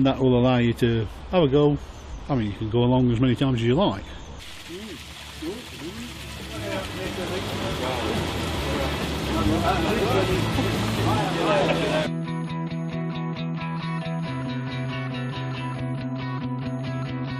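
At 13.36 s there is a brief blip caused by damaged data in a compressed stream. A short run of corrupted bytes left the decoder unable to read those frames, so it lost sync and searched for the next valid frame header, leaving a burst of garbled audio.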